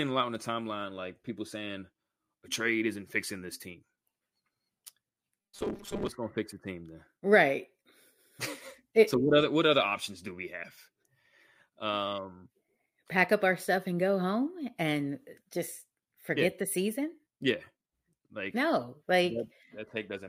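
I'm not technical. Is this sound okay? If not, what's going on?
No. From 5.42 to 6.10 s, just before "gonna fix the team", there's robotic sound from repeated short buffers: tiny 5 ms slices likely replayed over and over, roughly half the time, making a steady metallic 200 Hz buzz rather than silent gaps or stutters.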